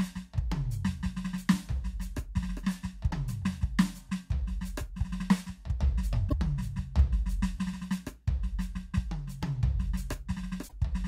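Damaged data in a compressed stream hits this music at 3.07–3.13 s, 6.26–6.33 s and 10.65–10.73 s: corrupted bytes make the decoder misread frames and lose sync until it finds the next valid header, giving short 50–80 ms bursts of garbled sound.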